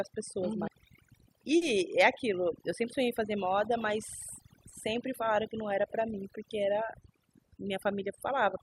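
Overdone noise removal runs through the whole speech clip. An aggressive noise reducer pulls individual frequency bands down whenever they sit near its noise estimate, so the background collapses into near silence dotted with twinkling specks.

A CD skip at 0.68 s is heard as a tick with a very brief mute, after which playback resumes from a different point. The laser has jumped to another turn of the disc's spiral, so the audio lurches forward or back.

Short concealed packet loss follows at 1.57 to 1.63 s and again at 4.69 to 4.73 s. About 40 ms and then 20 ms of audio never reached the decoder, which filled each gap by extending the preceding sound before blending back, leaving a short smear or wobble.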